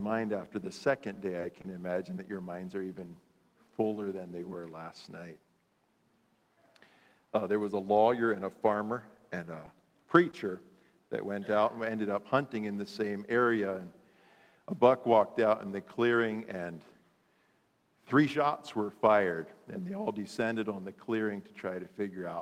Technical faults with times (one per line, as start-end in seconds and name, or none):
1.39-1.70 short stall from a late packet
10.31-10.35 short concealed packet loss